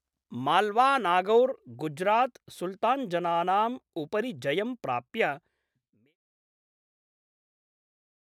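Nothing stood out on listening to this speech, apart from a smooth fade-out that begins around 5 s and reaches silence at about 6.17 s, with no click or hard edge.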